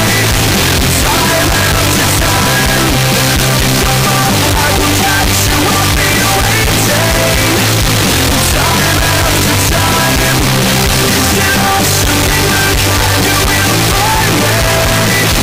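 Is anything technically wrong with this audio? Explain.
Yes. Throughout the whole clip the audio is blasted into a harsh, buzzy, near-square waveform sitting at an almost fixed, high level, with the background as loud as the foreground, though pitch can still be followed. This points to float read as integer, likely 32-bit float samples decoded as 32-bit integers, so sign and exponent bits set each value. Unlike ordinary clipping, which only flattens peaks, quiet passages here are just as loud and distorted as loud ones.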